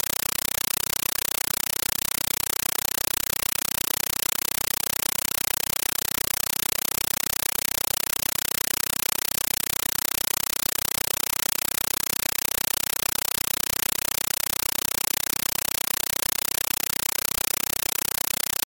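The speech is replaced by a compressed stream played as audio: loud, chattering static repeating 31.25 times a second, each 8 ms burst followed by silence, which fits an undecoded 384 kbps AC-3 stream. That fixed burst-and-gap rhythm distinguishes it from broadband hiss or clipping.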